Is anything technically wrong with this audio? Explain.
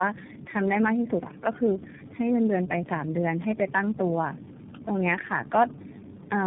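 Yes. Tandem speech coding runs through the whole clip. The speech passed through three low-rate speech codecs in a row, with the final stage likely iLBC. Each stage re-coded the previous one's damaged output. The result sounds rough, muffled and warbly, with nothing above 3.7 kHz.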